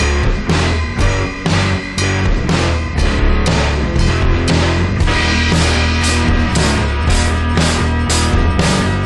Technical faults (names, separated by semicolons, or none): wrong sample rate